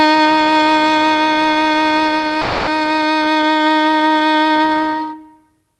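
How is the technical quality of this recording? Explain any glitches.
The music has one glitch, a long network dropout, heard through a call path whose Opus coding tops out near 12 kHz.

From 2.41 to 2.69 s the music likely lost its packets; the receiver stretched the last sound into a fading buzz, then resumed with that passage missing. A spectrogram shows smeared, fading bands without onsets; the waveform shows a decaying envelope.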